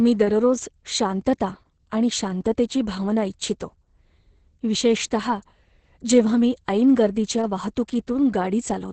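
Throughout, Opus voice compression, sounding like SILK coding at around 10 kbps, cuts everything above 8.7 kHz and leaves the speech muffled, hoarse and slightly robotic.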